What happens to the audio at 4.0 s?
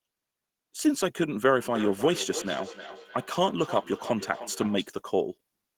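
At 4.0 s the speech comes back about every 0.3 s, each repeat thinner and more ringing, peaking about 12 dB below the speech. This is feedback echo between two devices, running from 1.64 to 4.92 s: one device replays another's microphone, which recaptures it.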